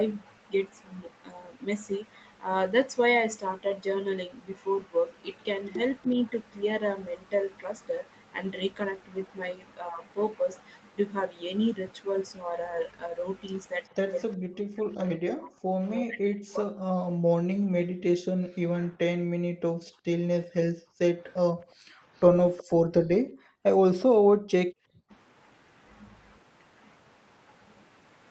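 At 13.84 to 13.88 s there is a brief echo leak: a very faint delayed copy of speech, trailing by about 369 ms, likely from a loudspeaker's echo canceller letting residual pickup through. At 22.57 to 22.64 s a second scrap returns at the same delay, louder, about 20 dB below the speech.

Between 14.35 and 16.76 s the speech is suppressed in double talk. For roughly one and a half seconds in total it dips in pieces, by around 40 dB at worst, likely because an echo canceller mistook overlapping talk for echo and turned the channel down.

From 17.04 to 25.1 s the background is gated by the echo canceller. The room sound drops out intermittently, for about four seconds in total, by up to about 40 dB, as the microphone is clamped while the loudspeaker plays, then restored on release.

At 19.54 to 19.66 s, within that span, a short burst of double-talk suppression cuts the speech again, by roughly 40 dB for about a tenth of a second, likely from the same canceller.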